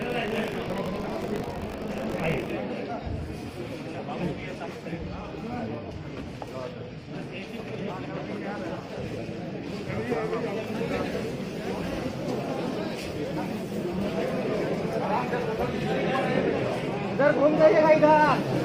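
The audio opens with buffer tearing from 0.00 to 2.54 s: a steady robotic rattle at 50 Hz, present while there's signal. The writer and hardware read pointer have slipped, so around a tenth of each roughly 20 ms period replays audio from about 70 ms earlier, with hard joins either side.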